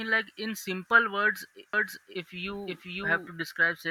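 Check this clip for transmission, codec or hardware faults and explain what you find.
One fault is present, a doubled audio track, from 1.73 s to 3.27 s. The likely cause is the same signal reaching the mix twice, once directly and once through a slower path, or an edit leaving two misaligned copies. A second, full-band copy of the speech trails the original by about half a second at roughly the same level, with no decay or room colour. It cuts in and out abruptly, so the speech overlaps itself and sounds cluttered.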